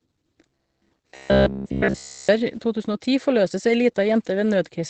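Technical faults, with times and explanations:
Throughout: Opus voice compression. The sound stops sharply at about 8.6 kHz, and what remains is muffled and slightly hoarse with a faint robotic edge. This is the wideband linear-prediction (SILK) mode coding the excitation coarsely, and it points to a bitrate around 12 kbps. A simple low-pass filter would only dull the top. Here the grain and hoarseness inside the band show the codec is discarding detail, not just the highs.
0.49 to 2.29 s: robotic sound from repeated short buffers. The sound becomes a rigid metallic buzz pinned at 66.8 Hz, still roughly tracing the speech underneath. Essentially the whole stretch is made of repeats. A fixed buzz at that rate fits a chunk of about 15 ms being replayed over and over, likely because fresh audio arrived too seldom and the gaps were filled while real audio was skipped. Codec roughness has no steady pitch and never locks onto one like this.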